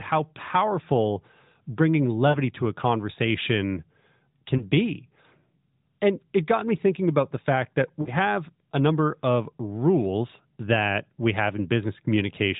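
At 2.30 to 2.38 s, 4.58 to 4.64 s and 8.02 to 8.10 s the speech shows lost AMR speech frames. Corrupted frames failed their checks, so the decoder extrapolated from the last good pitch and spectral settings while lowering the gain. The first and last gaps fit two 20 ms frames and sound like a short smeared, fading stretch. The middle one fits a single frame and is a brief dip. Recovery is rough for a moment against the band-limited narrowband AMR sound.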